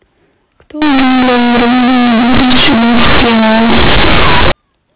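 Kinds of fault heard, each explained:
Companded audio read as linear: the stream holds mu-law bytes, which encode level on a logarithmic scale, but from 0.82 s to 4.52 s they are played as plain linear 8-bit samples with no expansion. Every sign change then jumps across about half the output range, so soft and loud speech come out equally huge and the waveform is badly bent, giving a very loud, harsh buzz with heavy noise filling the pauses, unlike the narrowband telephone sound around it.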